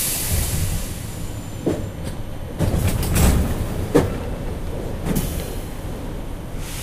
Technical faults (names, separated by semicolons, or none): none